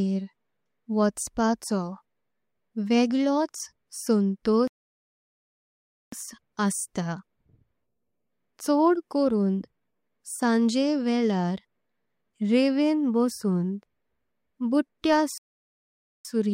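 At 4.68 s the speech cuts to silence for about 1.45 s, resuming at 6.12 s, and again at 15.38 s for about 0.87 s until 16.25 s. Both are playback stalls, likely the player running short of data or its thread being blocked.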